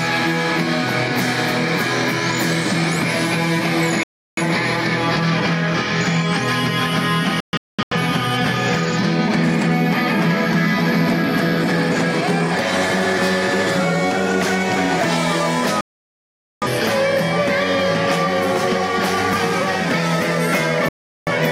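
The receiver repeatedly lost the digital stream and muted until valid frames returned, causing a digital broadcast dropout four times. At 4.03 to 4.42 s about 0.34 s of audio vanishes. At 7.40 to 7.97 s the loss is split into several short holes totalling about 0.43 s, the longest about 0.21 s. The longest gap runs from 15.81 to 16.67 s, about 0.81 s. The last runs from 20.89 to 21.32 s, about 0.38 s. Each drops to silence, and the missing audio never comes back.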